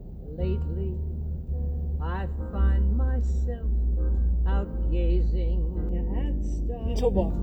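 Channel delay (comb filtering) sets in from 5.89 to 7.30 s: one channel runs late by well under a millisecond, and summing the two to mono cancels evenly spaced frequencies, starting around 1.5 kHz, leaving the sound hollow and phasey.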